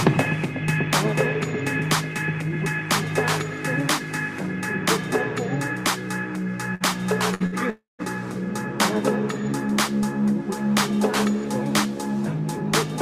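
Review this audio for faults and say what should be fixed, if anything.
Bursts of packet loss occur at 6.75, 7.34 and 7.46 s. Each gap lasts about 0.09 s. The receiver extends the last sound for roughly 60 ms and fades it, so a brief buzz or hiss replaces about 60 ms of audio. A larger jitter buffer with forward error correction would prevent this.

A long network dropout runs from 7.70 to 8.02 s. The last sound is stretched and faded, then falls to silence. About 0.3 s of audio is gone when sound resumes. The likely cause is a stalled connection. A more stable link with redundancy would prevent it.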